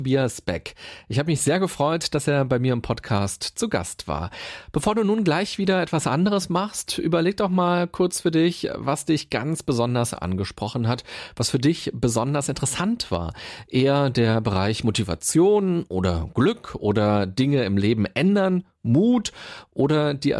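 No technical faults can be heard anywhere in the recording.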